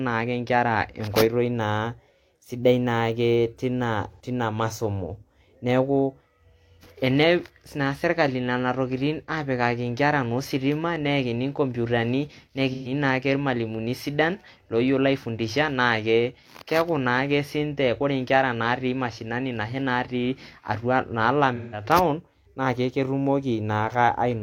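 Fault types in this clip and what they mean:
AAC frame loss with concealment: chunks of the encoded stream went missing, and the decoder filled the holes by reusing the last good spectrum instead of leaving a gap. It happens three times: at 4.11 s just before "teina masomo", at 12.72 s right after "naa ositima neyakini nkomputani", and at 21.56 s. Each is a brief smeared, noisy or phasey patch lasting about 0.1, 0.19 and 0.28 s, which fits two, three and four lost frames.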